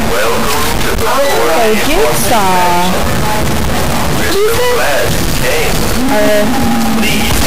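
From start to finish, the sound carries a harsh, buzzy distortion. It points to a stuck bit. One data bit is likely held at a fixed value by a faulty line or converter. Roughly half the samples then land off by that bit's weight, which is large, around -10 dBFS. The errors follow the waveform's shape. That is why the buzz tracks the sound. Quiet gaps fill with loud noise, because the bit flips with the sign of small values.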